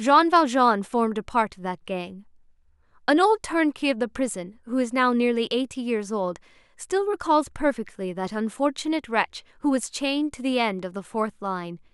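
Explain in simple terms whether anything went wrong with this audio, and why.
Nothing went wrong here, as far as listening can tell: the speech just carries along steadily, with nothing out of place at any point.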